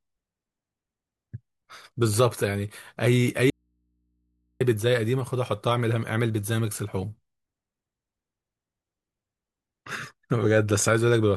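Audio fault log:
3.50–4.61 s, audio dropout to a faint residue: the speech cuts off abruptly and returns just as suddenly about 1.1 s later, with only a low mains hum, roughly 50 dB below the speech, filling the gap. This is likely a break in the signal feeding a path that stayed live, so the open input picks up hum. On a waveform the envelope collapses to a near-flat trace with vertical edges; a spectrogram shows a blank band crossed by thin hum lines at low frequency.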